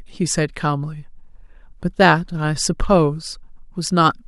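Listening through the recording, nothing stood out as a technical problem at any point.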